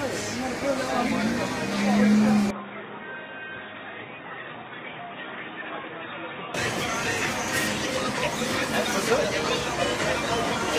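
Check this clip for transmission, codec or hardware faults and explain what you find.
One hardware-side fault: from 2.51 s to 6.54 s the sound drops about 10 dB and loses everything above 3.8 kHz, with a new noise floor some 30 dB down. This is likely an input switched to a poorer device, narrower and noisier, without a gap.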